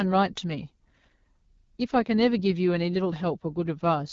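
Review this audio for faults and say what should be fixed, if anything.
The speech carries AMR wideband (HD Voice) codec damage for its full length, with a plainly rough, raspy texture and no content above 7.5 kHz. That roughness points to one of the lowest AMR-WB modes, which fits 8.85 kbit/s. At that rate the pulse excitation model captures the voice coarsely, and the top band is noise-filled rather than coded. To prevent it, negotiate 12.65 kbit/s or higher, or capture before the telephony leg.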